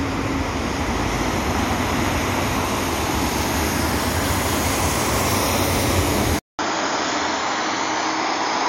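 At 6.39 s a silence of 200 ms is followed by a narrower sound that lasts to the end. Nothing is left above 7.1 kHz, a faint new noise floor appears and the overall level is unchanged, likely the input switched to a poorer device.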